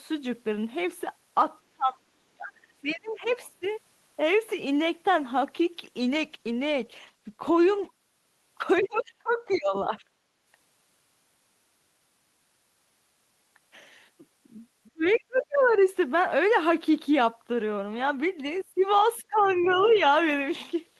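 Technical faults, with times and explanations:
1.71–3.64 s, 8.81–9.98 s, 14.93–15.77 s and 19.21–20.0 s, speech suppressed in double talk: The echo canceller likely could not separate the near talker from loudspeaker echo while both sides spoke, so it attenuated everything. The speech dips by roughly 20 to 35 dB, deepest at 14.93–15.77 s and shallowest at the end. It is affected over about one and a half seconds in the first span and less than a second in the last.
6.06–7.97 s, call bitrate drop: The bandwidth estimate fell and the encoder was switched from 32 to 16 kbps, staying at the lower rate for about 1.83 s. With half the bits, Opus quantises the spectrum more coarsely and narrows the coded band. The speech turns coarser. Clarity returns only when the rate climbs back.
8.77–9.56 s, 15.12–15.8 s and 19.39–20.0 s, other side's voice leaking through: Residual loudspeaker echo was likely not fully cancelled from the microphone signal. 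A second, faint voice comes through at roughly 25 dB below the main speech. Each instance coincides with the double-talk suppression, so the leak is heard while the main talker is being pushed down.
10.26–10.43 s, background gated by the echo canceller: With the loudspeaker active, the canceller clamped the microphone gain for a brief moment. The room tone dips by about 7 dB and then comes straight back as the canceller releases, giving a short hole in the background bed.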